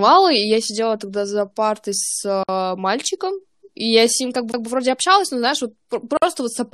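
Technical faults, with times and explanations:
2.43–2.49 s and 6.17–6.22 s, gap at a join of encoded pieces: the speech drops to silence for about 53 ms between "тогда за партой с" and "мальчиком и я с", then for about 51 ms just after "общалась но знаешь вот". Each piece was encoded on its own and joined untrimmed, so the encoder's start-up delay and end padding remain as dead air with smeared edges. Unlike a skip, the speech resumes exactly where it broke off.
4.52 s, CD skip: right after "и я с ним" and before "вроде общалась но знаешь" there is a very brief mute, shorter than the joins. The laser has jumped to another turn of the disc's spiral, and the player mutes while it relocks. What sets it apart from the gaps is the speech resuming from a different point rather than continuing seamlessly.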